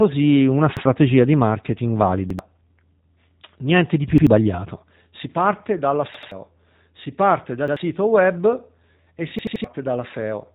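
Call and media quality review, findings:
G.729 codec throughout: rough, synthetic texture and no content above 3.8 kHz, from 8 kbit/s pulse-based speech rebuilding. Plain band-limiting would stay smooth.

Repeated buffer at 0.77, 2.30, 4.18, 6.14 (twice), 7.68 and 9.39 s (three times): an 85 ms chunk replayed with hard joins, fitting a 4096-sample playback buffer starving. This is an exact stutter, not concealment smearing.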